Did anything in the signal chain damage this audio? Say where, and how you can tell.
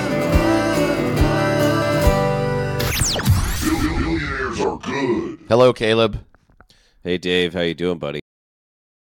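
Yes. There's a cut-off end, and it happens at the storage or buffer-flush stage. At 8.20 s the sound stops mid-event and drops straight to digital silence for the remaining 0.8 s or so, with no decay or tail at all. That abrupt stop points to the final buffers never being written out or played, so the recording was truncated rather than naturally ending.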